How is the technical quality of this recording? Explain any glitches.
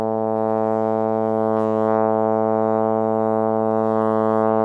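No technical faults are audible in this music recording.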